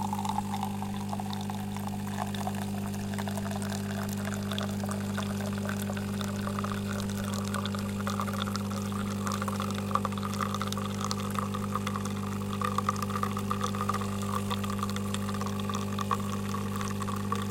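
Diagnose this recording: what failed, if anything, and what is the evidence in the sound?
Nothing failed; the sounds come through without faults.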